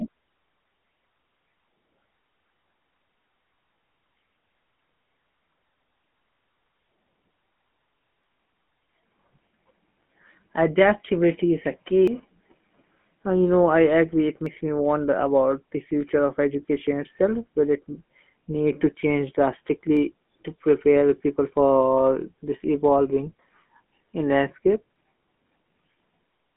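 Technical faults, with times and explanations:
Throughout, GSM full-rate codec: the speech is coded by modelling the vocal tract over pulsed excitation, giving a plainly audible buzzy, gravelly roughness with nothing above 3.4 kHz.
8.24, 12.08, 14.46, 19.97 and 24.96 s, dropped buffer (overrun): each is a jump with the speech skipping ahead, losing roughly 40 to 150 ms, likely because samples were overwritten before being read.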